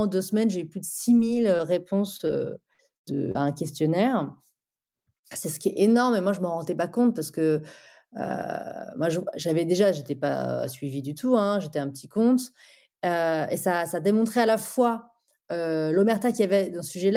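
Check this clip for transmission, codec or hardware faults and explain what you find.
Packet loss is audible in the first few seconds of this speech, as five short concealed losses and two longer bursts.

Short concealed packet loss occurs at 1.17–1.21 s (just after "j'ai eu plus de"), 1.57–1.61 s, 2.17–2.21 s, 2.27–2.31 s and 3.32–3.37 s. Each is a brief smear or wobble. The receiver bridged 20–40 ms of missing audio by extending the preceding sound.

Bursts of packet loss occur at 2.73–2.81 s and 2.97–3.06 s. Each is a held buzz or fading hiss, followed by a jump. About 60 ms and 80 ms were lost, and the receiver extended and faded the last sound before resuming later in the speech.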